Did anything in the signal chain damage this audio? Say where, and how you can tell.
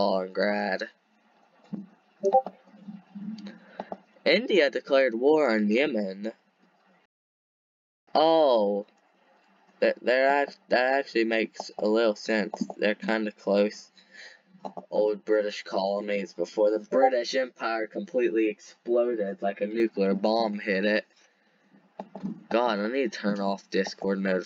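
Yes. At the playback stage there is a rebuffering stall from 7.06 to 8.07 s. The audio drops to silence for about 1.02 s, then picks up exactly where it left off with nothing skipped. The player's buffer emptied and waited for more data.

Between 13.8 and 19.8 s, a channel delay (comb filtering) at the driver or buffer stage makes the sound hollow and phasey. One channel runs roughly 10 ms late, and summing to mono cancels shared content at evenly spaced notches from around 40 Hz upward.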